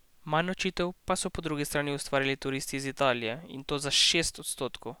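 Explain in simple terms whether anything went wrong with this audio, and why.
Nothing went wrong here.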